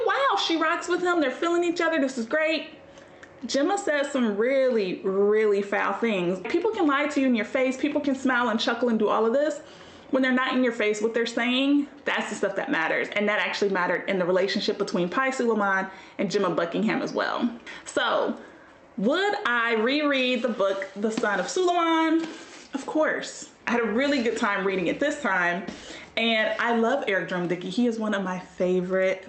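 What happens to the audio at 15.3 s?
Nothing goes wrong at 15.3 s: the sound passes through intact, carrying only the ordinary character of the call path it travelled, with no dropout, glitch or other fault at that moment.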